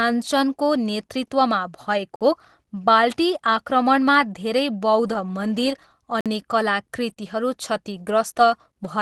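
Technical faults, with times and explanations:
2.16–2.21 s and 6.21–6.26 s, gap between chunks: The sound stops for 50 ms each time. The two holes sit 4 s apart, matching 4 s chunks. Silence was left between the chunks at each join. Nothing is lost, only interrupted.
3.32–3.34 s, 5.06–5.16 s, 7.09–7.11 s and 7.92–8.10 s, lost packet rebuilt from error correction: Stretches of 20, 60, 20 and 100 ms sound rougher and noisier. No hole appears. The decoder played low-bitrate copies carried in the following packets instead of the originals.
7.13–7.18 s, short concealed packet loss: About 20 ms never arrived in time. The decoder filled the hole by extending the preceding sound for about 24 ms, then blended back into the real audio. This is heard as a brief smear just after the rebuilt frame at 7.09 s. All of this passed through an Opus call path whose upper limit near 12 kHz fits a 24 kbps setting.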